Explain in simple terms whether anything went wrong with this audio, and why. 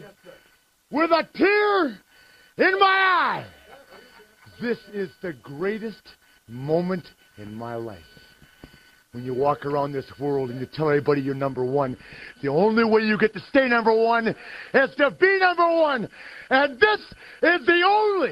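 A call bitrate drop starts at 11.51 s and runs to the end of the clip. The connection seemed to have less room, so the call software squeezed the sound into far fewer bits and stayed at its lowest setting for about 5.3 s. With less data it describes the sound more crudely and discards the top end, so the highest pitches stop near 12 kHz instead of 20 kHz. The last few seconds sound duller, rough and muffled.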